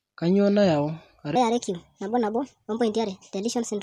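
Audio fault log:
1.36–3.83 s, wrong sample rate: from 1.36 s onward the speech runs about 1.38 times too fast and sits roughly 5.5 semitones higher, sounding chipmunk-like and hurried. Samples are being played faster than they were captured, with no conversion, which fits 32 kHz material played at 44.1 kHz. On a spectrogram, harmonics and formants jump upward at that point and syllables are squeezed narrower. The waveform looks compressed in time.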